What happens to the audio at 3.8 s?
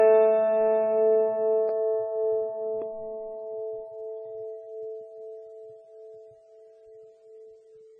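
At 3.8 s the music carries the watery, swirling smear of likely MP3 compression, present throughout. Starved of bits, consistent with roughly 16 kbps, it loses everything above 9 kHz, a flat spectrogram ceiling, with weak bands blinking on and off.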